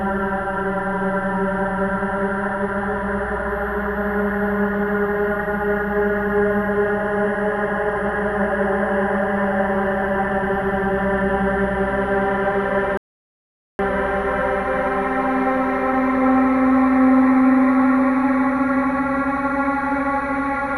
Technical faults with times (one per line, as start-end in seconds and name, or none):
0.00-20.78 switching supply whistle
12.97-13.79 rebuffering stall